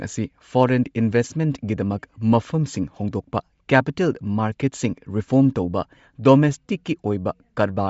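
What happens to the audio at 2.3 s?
At 2.3 s, as throughout, the speech has likely Bluetooth LC3 compression: nothing above 7.7 kHz, and noise-filled upper bands give a plainly grainy, breathy edge.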